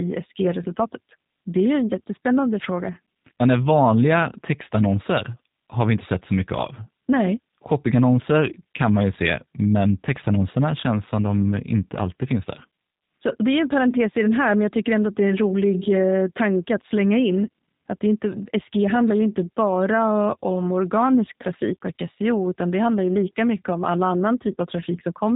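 From start to finish the speech sounds slightly rough and synthetic, with nothing above about 3.8 kHz. This is plainly audible G.729 codec damage, which fits 8 kbit/s G.729A rebuilding each 10 ms frame from a vocal tract filter, a pitch predictor and a few pulses.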